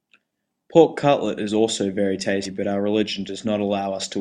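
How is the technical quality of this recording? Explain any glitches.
There's one glitch. At 2.45 to 2.50 s, compressed frames are skipped: around 150 ms of speech goes missing, which fits about seven 20 ms frames, so the audio jumps ahead.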